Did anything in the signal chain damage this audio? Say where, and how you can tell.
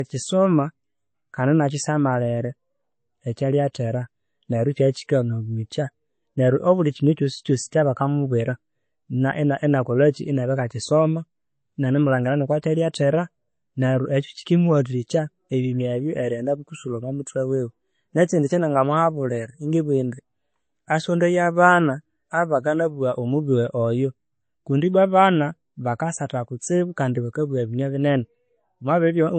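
Yes. Low-bitrate audio saved at a high bitrate, throughout, at the codec: nothing above 8.3 kHz, likely a low-rate MP3 cut-off that re-encoding at a higher rate cannot restore.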